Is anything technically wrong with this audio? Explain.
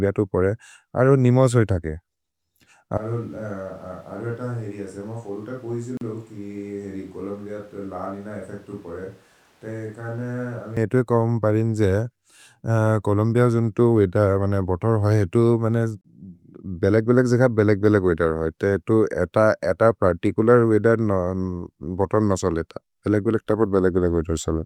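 Yes. From 2.97 s to 10.77 s, beginning just before "एतु कोम्परिन् जे", the speech turns roomy and hollow, thinner in the bass, about 10 dB quieter, with room noise only around 25 dB below it. This is likely a switch to a distant microphone, standing in for the close one, before the sound jumps back.

Brief silences cut into the speech at 5.97 s (39 ms) and 16.01 s (32 ms), ten seconds apart, with smeared edges. These are gaps at joins of encoded pieces: each separately encoded piece kept its start-up delay and end padding.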